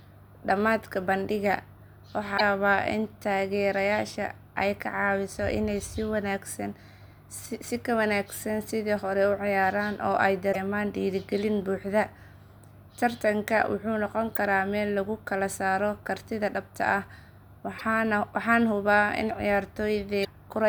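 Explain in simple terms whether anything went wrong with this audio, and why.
Yes, something went wrong. Damaged data in a compressed stream causes short blips at 2.34–2.41, 10.49–10.56, 14.35–14.38, 17.78–17.82 and 20.21–20.26 s. Broken bytes confuse the decoder until it finds its place again.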